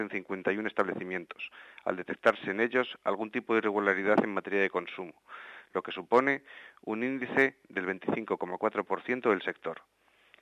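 No technical faults can be heard anywhere in the audio.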